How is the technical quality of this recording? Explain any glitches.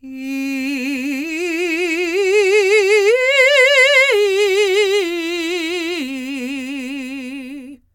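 Nothing in this bit of music stands out as a technical glitch, so there's really nothing to explain.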